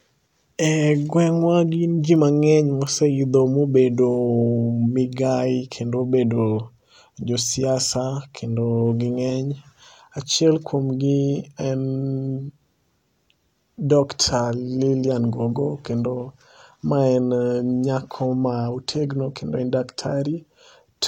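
At 2.16 s and again at 2.87 s there is a bit error spike. Each is one corrupted sample. A flipped bit makes the value leap by a power of two and snap back. The result is a single sharp tick, broadband and unrelated to the speech.

From 16.16 s to 20.16 s the adaptive stream drops to a lower bitrate. The quality changes abruptly, with no gap. Nothing sounds above 16.2 kHz. Codec artefacts grow, which fits a switch from 96 kbit/s AAC-LC to 32 kbit/s HE-AAC.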